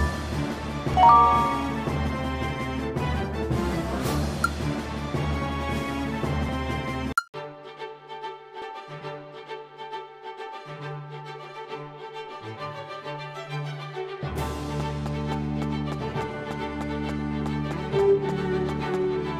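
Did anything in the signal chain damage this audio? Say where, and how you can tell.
Yes, there are four abrupt skips at 0.94, 6.49, 7.34 and 8.62 s. Each is a sudden jump in the sound with no gap of silence, as though about a tenth of a second were cut out and the edges spliced together. This is likely a dropped buffer (overrun) at the driver or buffer stage. On a waveform each spot shows a hard discontinuity. On a spectrogram it appears as a thin full-height vertical line.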